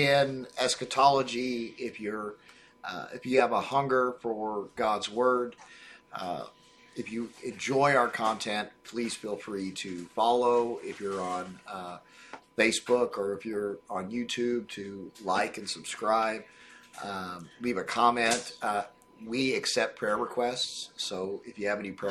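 A steady USB whine runs through the whole clip. It sits at a fixed 1 kHz, which is also its strongest component. The tone comes from the USB bus drawing current in 1 ms frames. That current leaks into the audio through the power or ground lines. The whine sits roughly 40 dB below the sound. It is faint but constant, a thin high tone that never changes pitch.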